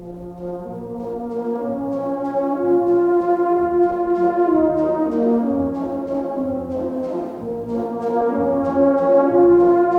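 No technical faults are audible anywhere in the recording.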